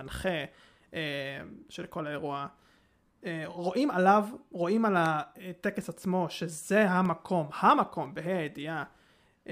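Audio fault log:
5.06 to 9.05 s, periodic USB or driver dropouts: about five ticks, exactly 1.0 s apart, each a sub-millisecond gap filled with silence as a blocked bus or driver starves the stream. The strict clock-like spacing sets it apart from random clicks.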